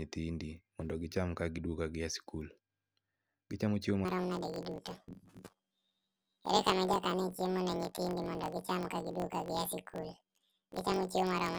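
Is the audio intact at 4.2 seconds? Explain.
No. From 4.05 s to the end, the speech sounds an octave high with a rough buzz at about 46 Hz. This is planar audio read as interleaved: each 21.8 ms block of left-then-right samples plays twice at double speed.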